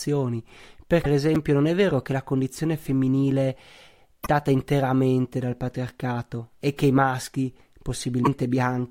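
At 1.01 to 1.06 s there is a short glitch. This is damaged data in a compressed stream. Some bytes in the encoded file were wrong there. The decoder could not read those frames and lost sync. It had to hunt for the next valid frame header before it could play on. The result is a brief disturbance in the speech.

At 1.35 s, just before "non è vero che", there is a tiny jumbled moment. Here chunks are out of order. A chunk of about 5.8 ms arrived one chunk late. It played after the chunk that should have followed it. No audio is lost. But the sequence is wrong, with hard joins between the chunks.

The same compressed-data fault returns twice. At 4.22 to 4.28 s, right before "interamente dal patriarcato e", another blip cuts in. At 8.22 to 8.27 s, near the end, a third glitch follows the same pattern.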